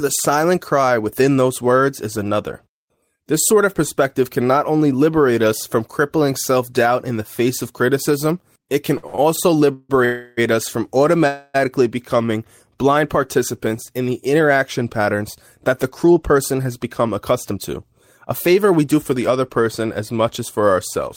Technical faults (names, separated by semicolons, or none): repeated stalls (stutter); call audio freeze; jitter buffer speed-up